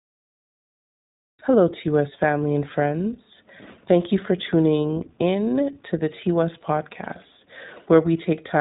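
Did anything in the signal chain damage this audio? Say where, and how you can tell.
Yes: the speech sounds band-limited, rough and synthetic throughout, with nothing above 3.8 kHz, consistent with iLBC codec coding at 20 ms frames, which fits 15.2 kbps.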